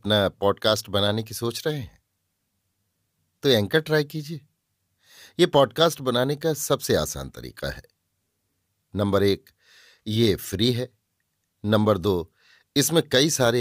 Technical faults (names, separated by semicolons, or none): none